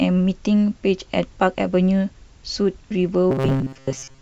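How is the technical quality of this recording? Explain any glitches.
Robotic sound from repeated short buffers appears from 3.31 s to the end at 4.21 s, where the speech turns into a rigid, metallic buzz near 134 Hz that only loosely tracks the words. A fixed pitch at that frequency fits a buffer of about 7.5 ms being replayed over and over. The likely cause is new audio arriving too seldom, so the software repeats that short stretch to fill most of the gap while the real audio is skipped.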